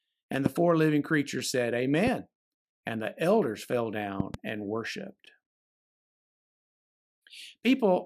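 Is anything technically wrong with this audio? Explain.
Yes, there are two kinds of fault in this speech.

Loud pops occur at 0.46 to 0.48 s, just before "four living creatures said"; at 2.07 to 2.10 s, just after "four living creatures said"; and at 4.20 to 4.36 s, just after "the elders fell", where two pops follow in quick succession. A sudden electrical step or pulse, likely from a plug, switch, static discharge or driver glitch, gets added to the signal. It is heard as a sharp thump standing around 10 to 15 dB above the speech, which carries on uninterrupted underneath. That continuity separates a pop from a dropout.

A gap at a join of encoded pieces appears at 5.26 s, a gap of 13 ms. The audio seems to have been encoded in pieces about 6 s long and joined without trimming, so one piece's padded final frame and the next piece's start-up delay both remain. The speech stops abruptly and resumes exactly where it left off, with the edges smeared by the codec. 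The sound drops out rather than having anything added on top, which is what distinguishes it from the pops.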